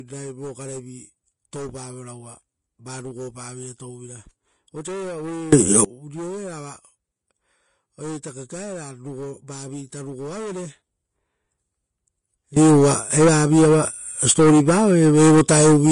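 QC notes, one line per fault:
Throughout: Vorbis compression. The speech carries plainly audible codec damage, hissy and grainy in the upper range, with nothing above about 10.6 kHz. That cut-off and the coarse treble texture point to a low bitrate Vorbis encode, likely around 32 kbps.
5.53 to 5.85 s, then 12.57 s to the end: sudden gain jump. Level leaps by about 24 dB on the first and about 17 dB on the second, speech and background noise rising together at once. A step with no ramp, likely a gain setting applied abruptly.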